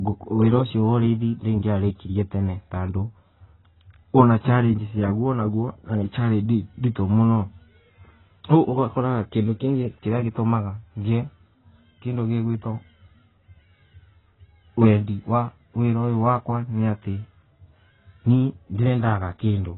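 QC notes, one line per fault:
Throughout, AAC compression: the speech has nothing above about 3.9 kHz and sounds dull and smeared, with a warbling, fizzy texture on sibilants. This is likely heavy AAC-LC coding, the lowered cut-off and starved bands pointing to a rate near 16 kbps.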